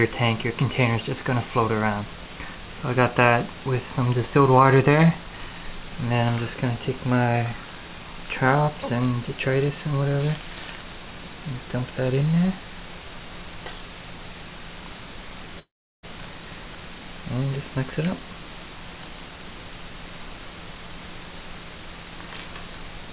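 From 15.59 to 16.05 s the audio breaks off: the last sound is stretched into a fading buzz, then gives way to near-silence, and playback resumes with roughly 0.44 s of material simply gone. This is likely a long network dropout, with the receiver's concealment briefly filling the gap. The call path band-limits everything to 4 kHz, consistent with a 64 kbps G.711 mu-law codec.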